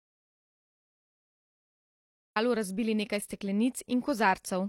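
An audio dropout to silence runs from the start of this speech clip to 2.36 s: the opening is dead silent with no room tone, and the speech only comes in at 2.36 s, likely because the input was lost and the recorder kept writing silence.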